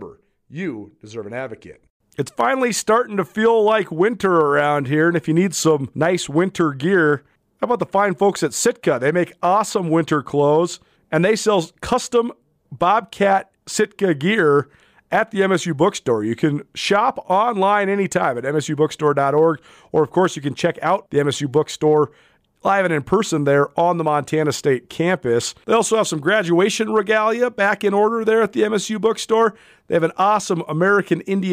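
No technical faults can be heard anywhere in this speech recording, and the signal stays stable and intact throughout.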